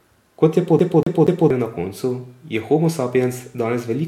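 From 0.79 s to 1.50 s the speech catches on a fragment about 0.24 s long and plays it three times in a fast, even stutter, with a tiny dropout at each restart, before moving on into "na koncu". This is a CD stuck on one turn: a scratch knocks the laser back one track at the same point on each revolution, so the same short slice of audio keeps returning until the player gets past it.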